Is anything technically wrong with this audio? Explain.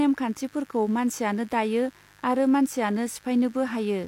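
Yes. The speech carries mains buzz from start to finish, a steady raspy hum at a 50 Hz fundamental sitting roughly 30 dB below the speech. Sharp switching spikes, twice per mains cycle, get into the signal path, for instance through a dimmer, rectifier or poorly shielded cable, and their sharpness spreads energy into a dense series of 50 Hz harmonics. A spectrogram shows evenly spaced horizontal lines at multiples of 50 Hz running the whole length, visible between words. The waveform shows a small repeating ripple with spiky peaks.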